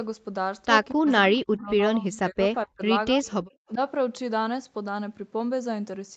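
Between 0.95 and 2.82 s the echo canceller likely could not tell the near talker from loudspeaker echo while both sides spoke, so it pulled the speech down too. This is speech suppressed in double talk: the speech ducks and breaks up for around a second in total, sinking by about 40 dB at its deepest. The same suppression returns briefly at 3.22 to 3.26 s, a dip of about 15 dB, and at 3.68 to 3.79 s, a shallower dip of about 10 dB.

An echo leak shows up inside that first stretch. The far end's echo canceller likely failed to remove all of its loudspeaker pickup, so a copy of the speech comes back 235 ms late. It appears as short scraps at 1.05 to 1.12 s, about 20 dB below the speech, and at 2.13 to 2.18 s, about 25 dB down. A longer, fainter tail follows from 3.25 to 3.73 s, about 30 dB below the speech, and overlaps the last suppression dip.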